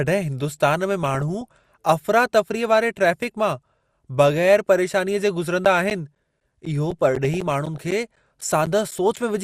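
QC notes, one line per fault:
Throughout: MP2 compression. The speech sounds dull and a bit gurgly, with a granular edge. The top end keeps dropping out as upper sub-bands get starved of bits, and what's left is coarsely quantised. It's plainly audible and most likely a low-rate encode, around 80 kbps.
1.03–1.85 and 6.91–7.78: DAB burbling. The first burst starts right after "हिंदुस्तान में". That fits bit errors at a fraction of a percent slipping past error correction, so short blips of noise land in single sub-bands across a few dozen frames.
5.65–9.17: periodic USB or driver dropouts. There's a regular tick every 0.25 s, about fifteen in all. Each one is roughly 10 ms of audio replaced by silence, the way a background task stalling the bus or driver on a fixed schedule would do it. The ticks only show up where there's signal.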